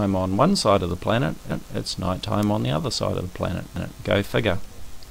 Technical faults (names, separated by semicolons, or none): overlapping chunks